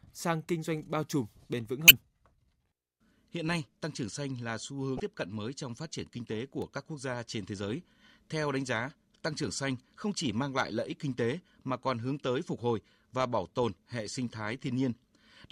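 Damaged data in the compressed stream of this speech recording makes the decoder lose frame sync twice, giving brief glitches at 1.87 to 1.91 s and 4.97 to 5.00 s. At 6.62 s a short spike is added on top of the sound, likely an electrical switching spike from a nearby switch or discharge.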